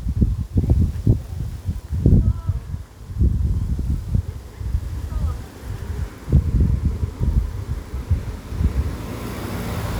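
No technical faults turn up anywhere in this audio.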